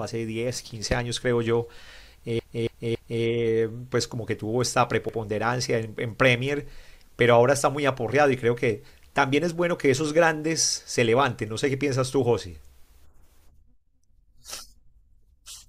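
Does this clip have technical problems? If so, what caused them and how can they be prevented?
Yes. Repeated frames occur from 2.39 to 3.23 s, where a 278.6 ms block plays three extra times, and at 5.09 to 5.18 s, where a 92.9 ms block repeats once, adding about 0.93 s of stutter. Deduplicating frames by sequence number during writing or transmission prevents this.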